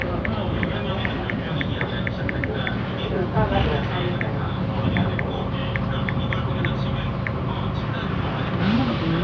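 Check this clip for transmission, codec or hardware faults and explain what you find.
Nothing here points to a transmission, codec or hardware problem; the sound comes through steady and intact with no dropouts, glitches or distortion to flag.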